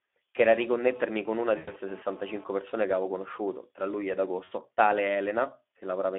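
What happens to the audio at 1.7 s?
At 1.7 s the sound is near the end of a VoIP packet loss concealed by the speech codec, running from 1.57 to 1.71 s. About 100 ms of data went missing, which fits roughly five lost 20 ms frames. The Speex decoder filled the gap by repeating its last pitch and filter at falling gain, so the sound smears into a fading buzzy tone or coloured noise rather than cutting to silence. That fading sound is what sets it apart from a plain dropout.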